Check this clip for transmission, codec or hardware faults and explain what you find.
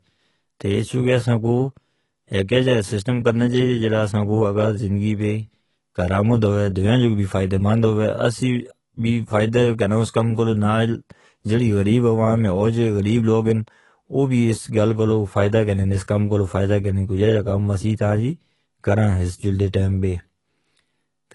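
There is one codec fault, present throughout the clip: AAC compression. The speech has nothing above 11.5 kHz and sounds dull and smeared, with a warbling, fizzy texture on sibilants and held vowels. The likely cause is an AAC-LC encode at a low bitrate, which fits roughly 32 kbps. At that rate the encoder lowers its cut-off and coarsely quantises each frame's frequency lines, leaving holes in the spectrum.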